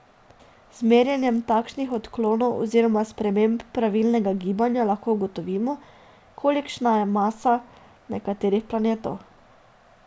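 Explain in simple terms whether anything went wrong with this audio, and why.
Up to 2.28 s, before "oziroma sprememb pravilnega gibanja", a resampler restarted on every 20 ms block buzzes at 50 Hz only with sound, unlike steady hum.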